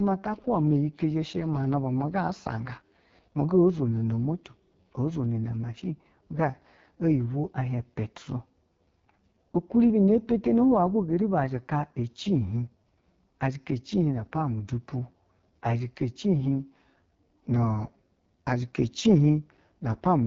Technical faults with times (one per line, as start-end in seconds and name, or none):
0.00-20.26 AMR wideband (HD Voice) codec